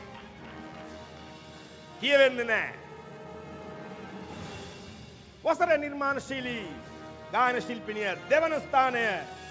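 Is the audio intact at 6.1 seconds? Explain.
Yes, the audio is intact at 6.1 seconds, with nothing wrong at that moment beyond the band limit of the wideband call path, which leaves no content above 8 kHz.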